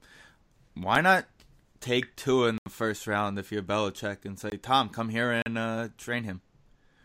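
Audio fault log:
0.95, 2.58–2.66, 4.50–4.52, 5.42–5.46 s: block of digital silence. A sharp tick at 0.95 s, then holes of 80, 20 and 40 ms. The audio drops abruptly to silence and back, as when the output buffer is not filled in time.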